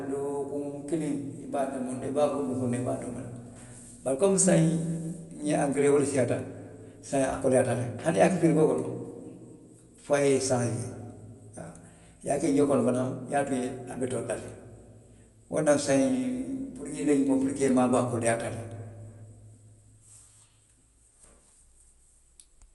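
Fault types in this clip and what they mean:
Dolby Digital compression: The speech sounds dull, with nothing above about 11.4 kHz. A rough, fluttering noise clings to voiced tones. This likely comes from a low-bitrate AC-3 style encode, around 64 kbps, where many frequency lines get no mantissa bits and are filled with noise.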